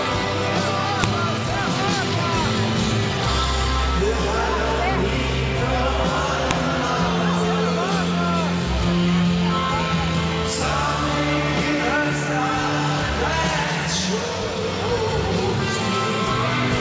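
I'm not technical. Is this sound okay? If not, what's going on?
No. The audio was made by joining separate files, and the small data block at the start of each file, which describes the file rather than holding sound, was left in and played as if it were sound. This fault is called a file header played as audio. You hear it as a sharp, sudden click or snap at about 1.04 seconds and again at 6.51 seconds, each marking where a new piece begins.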